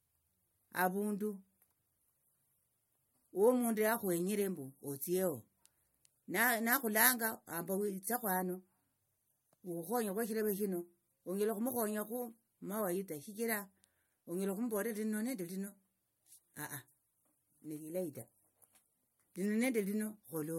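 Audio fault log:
Throughout: low-bitrate audio saved at a high bitrate. The speech carries a smeared, swirly coarseness and nothing above 16.6 kHz. This likely comes from an earlier low-rate MP3 pass, around 64 kbit/s, re-encoded near 190 kbit/s, which cannot restore what was discarded.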